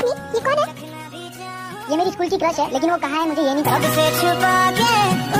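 No technical faults can be heard anywhere in the clip. Nothing in the audio suggests a break or disturbance in the way it was captured or passed along.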